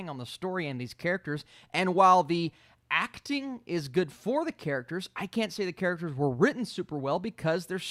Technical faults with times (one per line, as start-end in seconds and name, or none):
none